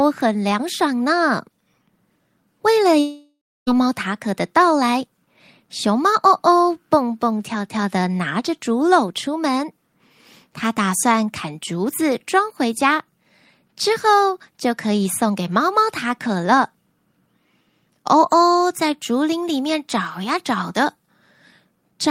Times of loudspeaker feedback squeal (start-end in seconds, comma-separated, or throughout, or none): none